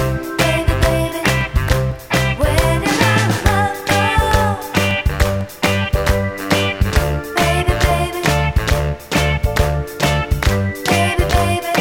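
From 0.41 to 7.91 s, periodic USB or driver dropouts tick every 0.5 s. Each drops roughly 2 ms to silence, about fifteen regular pops.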